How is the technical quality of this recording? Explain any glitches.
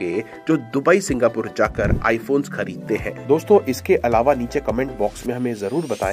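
No glitches can be heard anywhere in the recording, and the signal stays technically intact throughout.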